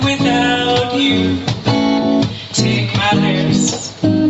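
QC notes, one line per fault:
Throughout: gain pumping. The gain swings by around 10 dB. The likely cause is input gain set far too high, with a fast limiter clamping every peak, so levels sound squashed.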